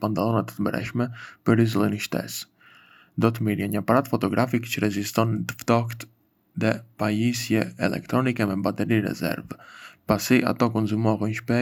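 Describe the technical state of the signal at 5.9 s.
At 5.9 s the speech signal is intact, with no audible fault at that moment.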